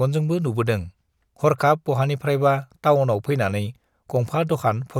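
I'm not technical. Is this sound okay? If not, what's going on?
Yes, nothing stood out as a problem when listening to this recording.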